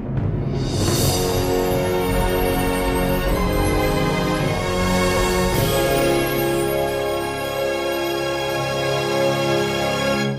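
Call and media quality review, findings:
Nothing to flag here; had a listen and there's no fault to raise against this one.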